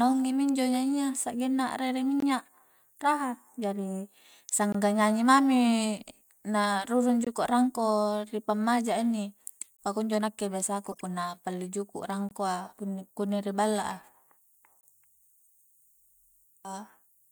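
Gaps between chunks break the speech at 2.20, 4.72, 7.25 and 9.77 s. Each hole lasts about 21 ms. The spacing is steady, about 2.5 s apart. That regularity points to audio delivered in 2.5-second chunks, with a small stretch of silence inserted at each join. Nothing is missing. The flow is simply cut for an instant.

From 10.89 to 11.02 s, a corrupt frame was decoded. A handful of compressed frames were damaged, and the decoder played them anyway. Misread values put energy at the wrong frequencies. The result is a brief burst of chirpy noise, peaking near -25 dBFS.

The chunk gaps return at 12.29 and 14.81 s. They have the same dropouts of about 21 ms, on the same 2.5-second rhythm.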